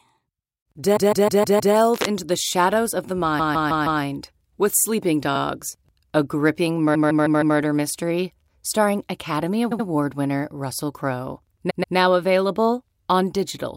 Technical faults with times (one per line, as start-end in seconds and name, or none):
0.95-1.74 repeated frames
1.92-2.07 cable scratch noise
3.38-4.01 repeated frames
6.94-7.56 repeated frames
9.71-9.86 repeated frames
11.69-11.95 repeated frames